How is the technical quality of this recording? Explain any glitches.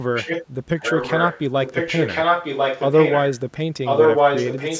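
Quality is poor because of an echo leak that runs through most of the speech. A copy of the voice, delayed by about 1.04 s, is heard from 0.14 to 0.46 s, 0.79 to 1.42 s, 1.64 to 3.36 s, and 3.85 s to the end. At first it is slightly quieter than the voice. By mid-clip it is as loud, and at the end it is louder. The likely cause is a loudspeaker at the far end whose echo canceller let its microphone pickup return. On a spectrogram, harmonic patterns reappear about a second later over new speech, inside a band that stops at 8 kHz.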